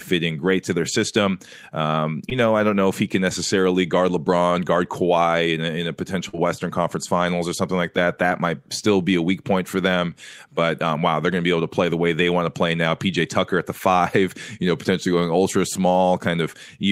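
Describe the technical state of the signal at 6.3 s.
At 6.29 to 6.35 s there is a short concealed packet loss: about 40 ms of speech arrived too late for decoding, and the receiver bridged roughly 44 ms by extending the preceding sound before crossfading back, leaving a brief smeared wobble in the speech.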